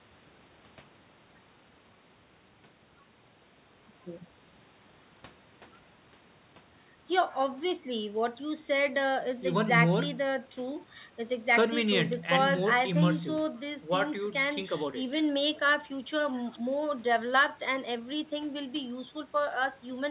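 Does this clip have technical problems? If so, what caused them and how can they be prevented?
No, no technical faults here.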